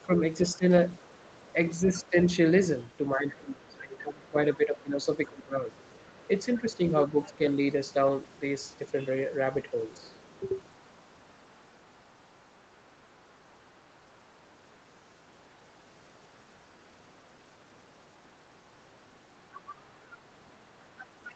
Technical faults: speech suppressed in double talk; other side's voice leaking through

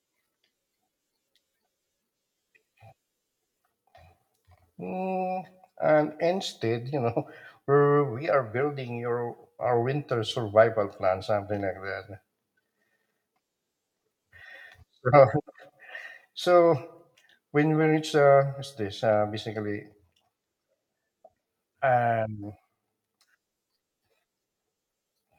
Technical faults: none

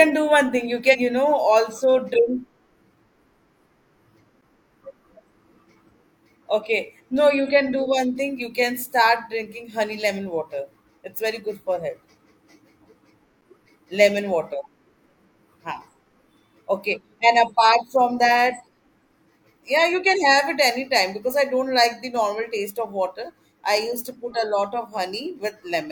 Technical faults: damaged data in a compressed stream; block of digital silence

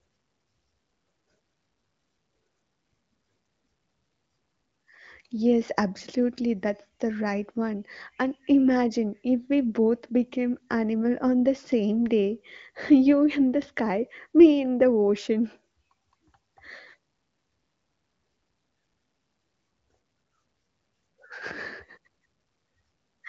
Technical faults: none

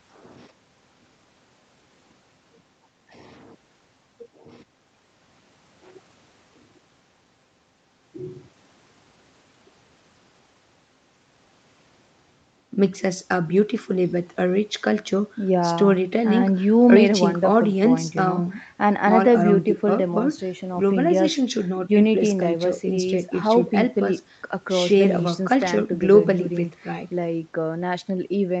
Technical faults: none

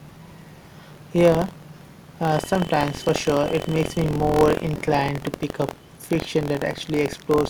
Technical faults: buffer tearing

